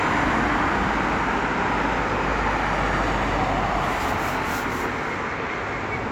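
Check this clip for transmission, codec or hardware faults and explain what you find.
One hardware fault runs through the whole clip: computer activity noise.

From start to finish, a faint buzzing, chirping texture sits some 40 dB below the sound, made of rapid pulses at around 70 per second. It rises and falls on its own schedule, unrelated to what the sound is doing. Shifting current draw in the computer's processor, graphics card or mouse disturbs the ground the audio circuit shares with them, so that activity leaks in as noise.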